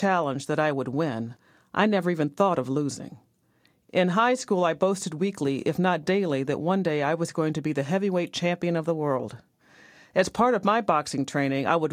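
A short speech recording with no technical fault to point to anywhere in it. Nothing calls for a time stamp or a cause.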